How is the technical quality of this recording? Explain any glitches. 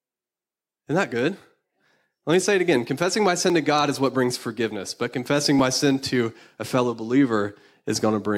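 Regular clicks break up the speech. From 1.41 s, just after "that good", four clicks recur every 2.1 s until 7.69 s: clock drift buffer slips, likely from two unsynchronised device clocks, each dropping or repeating a few tens of samples.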